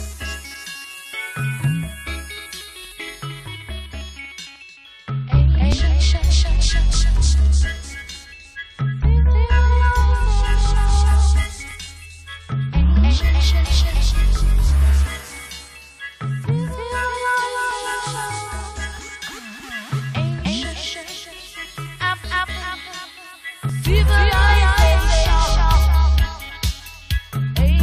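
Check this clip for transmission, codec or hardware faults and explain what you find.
The audio has one transmission fault, an overlap between stream segments, heard as four brief skips at 5.72, 11.71, 17.71 and 23.69 s. They fall about every 6 seconds, which points to 6-second segments whose time stamps overlap slightly. At each join the player trims a few milliseconds of sound that was never actually duplicated, so the waveform jumps forward. Unlike a dropout, nothing goes silent; the sound simply lurches on, at a steady segment-length rhythm rather than at random.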